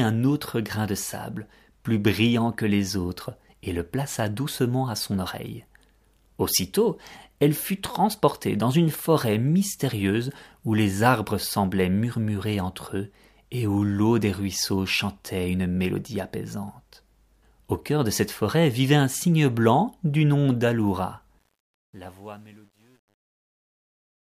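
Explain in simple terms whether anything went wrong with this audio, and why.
The fade-out at the end of this speech clip has truncation distortion. From 21.39 s, the volume stage that lowers the level keeps too few bits, which fits roughly 10-bit precision. From 21.9 s to the end at 24.21 s, the fading sound turns gritty instead of thinning out cleanly.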